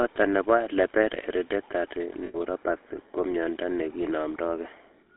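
The whole clip of speech carries the sound of the GSM full-rate codec. The band runs from about 250 Hz to 3.7 kHz, so there is no air above that. The codec rebuilds the voice from a vocal-tract filter fed by sparse, regularly spaced pulses. Much of the fine excitation detail is thrown away. The result is a plainly audible buzzy, gravelly roughness. This fits the 13 kbps full-rate mode.

From 2.26 to 2.36 s there are lost GSM frames. The decoder had no good data for this stretch. It reused the parameters of the last good frame and repeated them. This is heard as a brief, rough, metallic ring held in place of the real sound. The gap lasts about 80 ms, which points to four 20 ms frames. It is too short to fade fully to silence.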